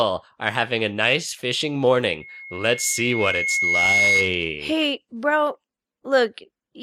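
At 2.20 s, loudspeaker feedback squeal begins. A steady tone near 2.2 kHz swells over roughly two seconds, ending a little louder than the speech. The microphone is re-amplifying its own loudspeaker. At that frequency the loop gain exceeded one. It stops at 4.48 s.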